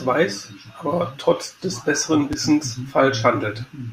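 A speech recording with a single loud pop at 2.33 to 2.35 s, a sharp transient peaking roughly 10 dB above the surrounding signal while the speech continues beneath it. The likely cause is a brief voltage step or pulse entering the chain, from a connector, switch, static discharge or driver glitch, which the downstream circuitry shaped into a short, hard click rather than a clean edge.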